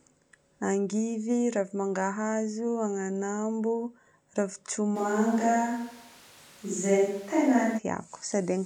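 From 4.97 to 7.77 s the close microphone's feed likely dropped out, leaving a more distant pickup carrying the speech: a switch to a distant microphone. The voice abruptly turns roomy and hollow, with thinner bass, while the overall level holds roughly steady. Background room noise rises to around 30 dB below the speech. At 7.77 s the close, dry sound returns just as suddenly.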